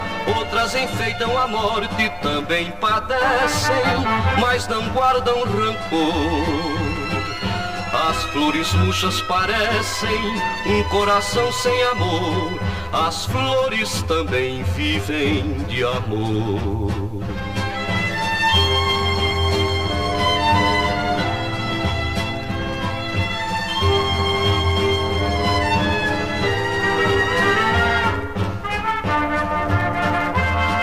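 From start to finish, channel delay causes comb filtering. One channel lags roughly 10 ms, so mono summing carves evenly spaced notches from about 50 Hz upward, leaving everything hollow and phasey.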